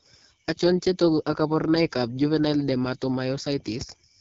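Rough, raspy speech throughout, with nothing above 7.3 kHz: plainly audible AMR wideband (HD Voice) codec damage, which fits its low 8.85 kbit/s mode.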